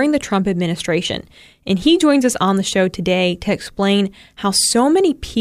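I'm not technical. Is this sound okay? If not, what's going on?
Yes, nothing in this recording stood out as a problem when I listened to it.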